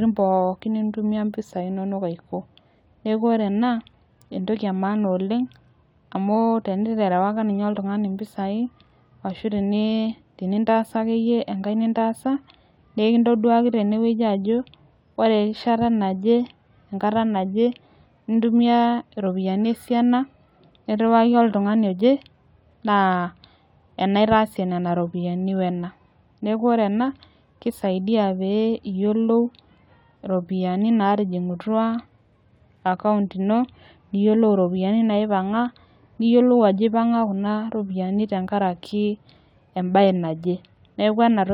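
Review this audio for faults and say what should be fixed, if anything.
Nothing stood out on listening, so there is nothing here that needs fixing.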